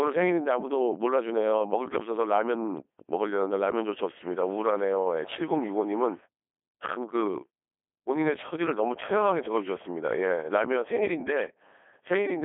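Codec 2 vocoder, throughout: the decoder rebuilds the speech from pitch and a spectral envelope, giving heavy, robotic buzz with a 300 Hz to 3.4 kHz band and nothing above 3.5 kHz, which fits about 2.4 kbit/s.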